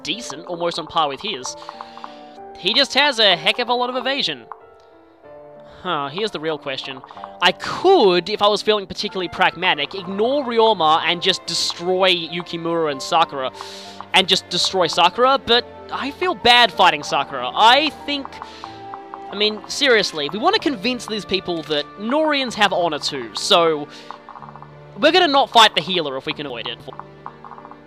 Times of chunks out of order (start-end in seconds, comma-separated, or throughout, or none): 26.50-26.90